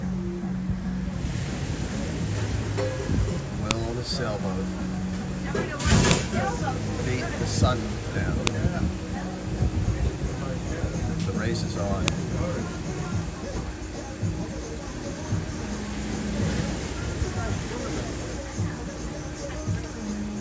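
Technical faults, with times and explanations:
3.71, 6.11, 8.47 and 12.08 s, file header played as audio: separate WAV pieces were joined or streamed one after another without their headers being stripped, so at each join the few dozen bytes of header data were read as sample values. Those bytes bear no relation to the waveform around them, so each join produces a brief, sharp, loud click or snap that cuts through whatever the sound is doing at that moment.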